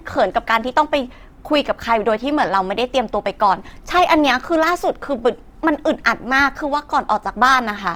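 Across the whole recording the speech sounds rough and grainy, with a noisy, sandy texture laid over the tonal parts where clean harmonics should be, and the damage is plainly audible. The treble still reaches to about 20.4 kHz, so it isn't muffled. This is likely Opus compression in its CELT music mode at a low rate, one that fits roughly 24 kbps, where bands short of bits get filled with folded or noise content.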